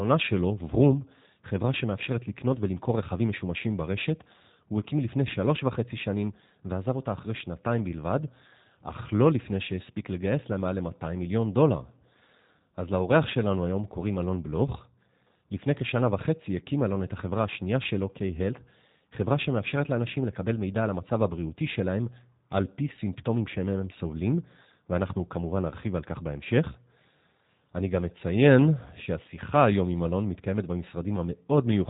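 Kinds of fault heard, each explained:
G.729 codec: The speech sounds muffled and slightly rough and buzzy throughout, with a synthetic edge and nothing present above 4 kHz. The clip has been through a low-rate speech coder, consistent with about 8 kbit/s, that keeps only a vocal tract filter shape, a pitch prediction and a few pulses in each short frame rather than the waveform itself, which makes this loss of detail plainly audible.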